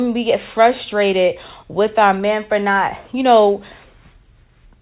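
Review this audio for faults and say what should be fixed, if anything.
Nothing here needs fixing; the speech sits comfortably within the usual telephone band, much as you'd expect from A-law coding at 8 kHz.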